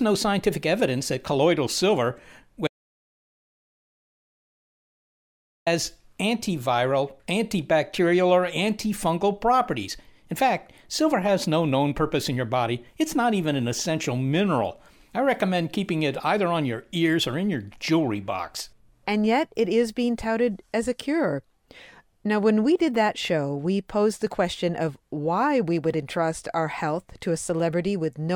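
At 2.67 s the speech cuts off abruptly. It returns at 5.67 s, again mid-flow. This is an audio dropout to silence. The gap lasts about 3 s. It is silent, with no room tone or hiss underneath. The input was likely lost for that stretch, through a disconnected source, a broken link or a brief mute, while recording carried on. Whatever was spoken in those 3 s is gone.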